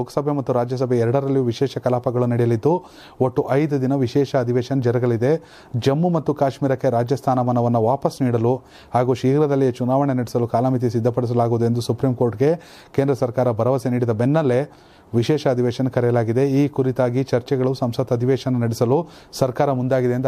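Nothing in the audio stood out as a technical problem on listening.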